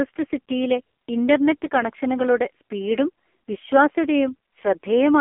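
From start to finish, the speech carries the sound of the AMR narrowband mobile codec, the 2G/3G phone codec, at a heavily starved setting. The vocal-tract model, rebuilt from a few pulses per 5 ms slice, makes the voice buzzy and synthetic, which points to one of AMR-NB's lowest modes, near 6 kbps. The band runs from about 250 Hz to 3.4 kHz. A spectrogram shows a hard ceiling at 3.4 kHz with nothing above it.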